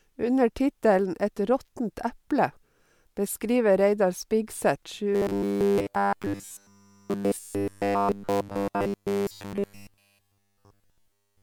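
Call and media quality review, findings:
Robotic sound from repeated short buffers, 5.13 s to end of clip. Likely cause: playback starved of new audio, repeating a short segment of about 10 ms in place of essentially all incoming speech. Result: rigid metallic buzz at 100 Hz.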